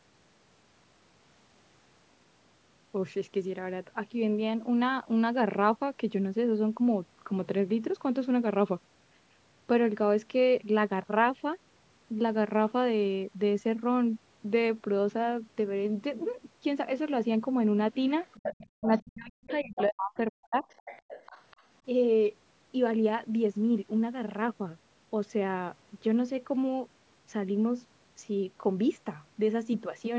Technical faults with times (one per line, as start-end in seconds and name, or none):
18.37-20.66 speech suppressed in double talk
18.43-18.66 other side's voice leaking through
19.50-19.83 other side's voice leaking through
20.70-21.63 other side's voice leaking through